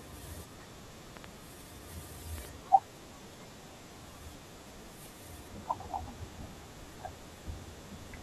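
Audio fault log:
1.17–1.26 s and 2.38–2.47 s, loud pop: each is a quick double pop sitting on the speech, the first about 15 dB over it, the second about 10 dB, with the talking carrying on underneath. That's likely a voltage glitch from a plug, switch or static.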